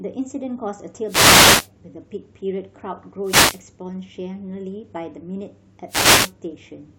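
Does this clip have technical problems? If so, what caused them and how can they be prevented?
Yes. Three wireless microphone noise hits occur, at 1.05–1.70 s, 3.21–3.64 s and 5.87–6.33 s. The speech gets brief swishes of static as the FM radio signal fades and receiver noise rises. A spectrogram shows broadband noise patches. Diversity receivers and clear line-of-sight antennas prevent this.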